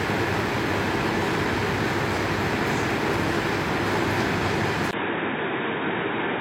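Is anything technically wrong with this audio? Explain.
Yes. At 4.91 s the recording likely switched its input to a poorer device, so after a 20 ms gap the sound plays to the end band-limited, with nothing above 3.8 kHz, dull and boxy, at unchanged level, over a faint new noise floor.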